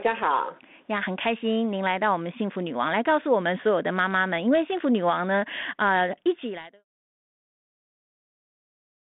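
Nothing stood out as a fault on listening to this speech recording.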